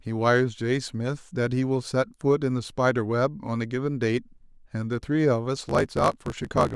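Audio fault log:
5.55–6.75 s, block size mismatch (truncated): right at the tail the speech suddenly picks up a steady buzz at about 54.4 Hz and starts hurrying along about 1.16 times faster, though the timbre stays put. That's one stage writing longer blocks than the next one reads, so the end of every block gets chopped off. The buzz is those chops landing at the block rate, and the sizes fit a 512-sample write against a read about 1.16 times shorter.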